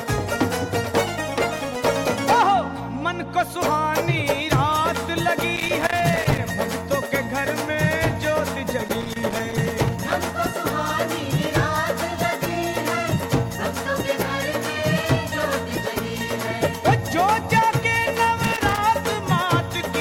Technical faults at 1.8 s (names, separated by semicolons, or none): loose connector crackle